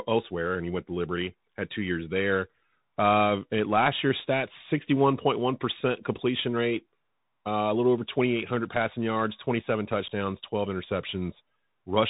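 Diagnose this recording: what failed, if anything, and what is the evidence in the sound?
Bluetooth CVSD headset codec, throughout the speech: the codec stage has failed. Nothing passes above 3.8 kHz, and a granular hiss sits underneath. Each sample is coded as one up-or-down step, which fits a 64 kbps link, so loud high sounds outrun the adapting step, and s sounds come out scratchy and distorted.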